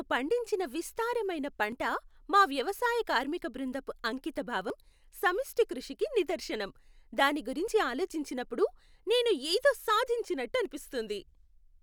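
Four brief skips cut into the speech at regular intervals: at 1.72 s, between "పండించిన విస్తారమైన" and "మా వ్యవసాయ కార్మిక బృందపు"; at 4.7 s, just before "సమిష్టి కృషికి నిదర్శనం దాని"; at 7.68 s, between that phrase and "ఆలోచించినప్పుడు నేను ఏదో"; and at 10.65 s. Each drops around 20 ms and butts the two sides together without a pause. The steady three-second spacing points to audio missing between chunks, likely from a recorder losing a sliver each time it closes one three-second chunk and opens the next.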